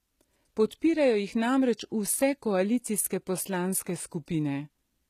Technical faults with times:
0.00-5.10 HE-AAC compression

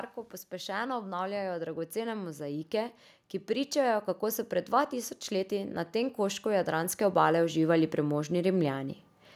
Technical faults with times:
0.49-8.97 automatic gain rising

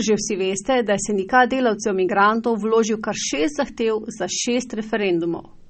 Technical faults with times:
0.00-5.70 low-bitrate audio saved at a high bitrate

